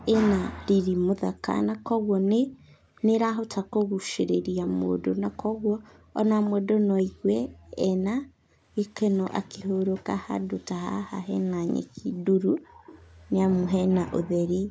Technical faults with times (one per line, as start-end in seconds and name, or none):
1.73-4.73 echo leak
1.97-8.60 background gated by the echo canceller
6.45-7.03 echo leak
9.25-9.31 echo leak
10.45-12.64 background gated by the echo canceller
12.55-13.64 echo leak
14.47-14.70 background gated by the echo canceller